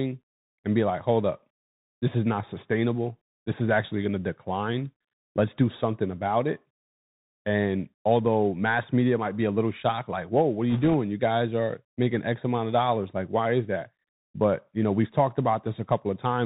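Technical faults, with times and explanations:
Throughout: Bluetooth CVSD headset codec. The speech is squeezed into a narrow telephone band. Nothing above 4 kHz comes through, so it sounds dull and boxed in. The codec sends one bit per sample, saying only up or down, and adapts its step size as it goes. Loud, fast-rising sounds outrun that step and smear into distortion. S sounds turn scratchy. A fine granular hiss sits under everything. The damage is plainly audible, which fits a 64 kbps CVSD stream.
10.70 to 10.94 s: bit errors on a Bluetooth voice link. For about a quarter of a second, a rushing, crackly noise washes over the speech. Bits on the headset link were flipped, at a rate of around one or two percent. Each bit in this codec carries only a small step, and the decoder recovers quickly. So there are no sharp, loud clicks. Instead the errors pile up as a brief gritty roughness that fades once the link clears.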